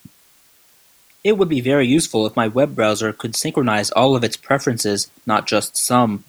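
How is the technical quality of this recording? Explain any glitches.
The recording carries a constant hiss from start to finish, caused by low bit depth with dither. The speech appears to have been stored at a coarse resolution that fits roughly 9 bits, with dither noise added before rounding. That noise turns the rounding error into steady white hiss about 35 dB below the speech. Without dither, the same coarse resolution would make grainy distortion that follows the speech and drops out in pauses. Here the hiss stays even and free of distortion.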